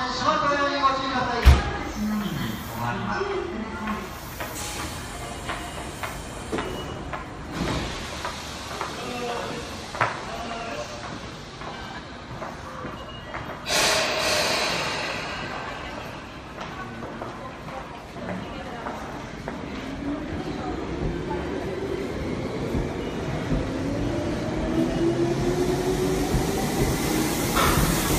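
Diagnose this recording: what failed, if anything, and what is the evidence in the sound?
Codec stage: compressed frames skipped at 11.94, 12.91, 18.12, 20.34 and 23.78 s. The audio jumps ahead a tenth to half a second each time, which fits dropped 46 ms frames.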